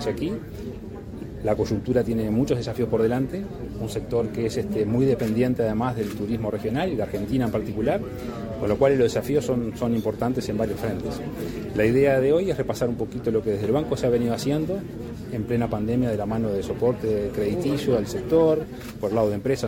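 No technical faults can be heard anywhere in the audio. There is nothing here that needs repair.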